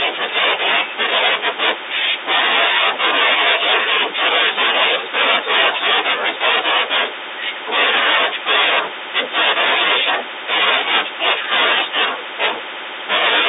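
Nothing is technically wrong with this speech recording, which carries the narrow 300 Hz to 3.7 kHz band of an ordinary G.711 telephone line.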